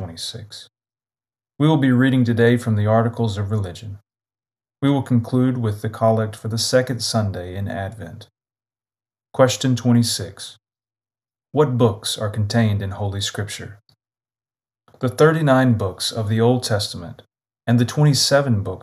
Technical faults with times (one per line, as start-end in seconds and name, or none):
none